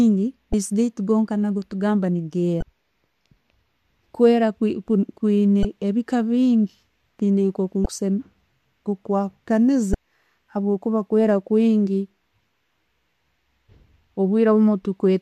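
Damaged data in a compressed stream causes five short glitches in this speech, at 0.51, 2.59, 5.62, 7.83 and 9.91 s. The first comes just before "gaitu netugamba", the second just after it. Each lasts about 30 to 50 ms. Corrupt frames make the decoder lose sync, so each is heard as a brief chirp or blip.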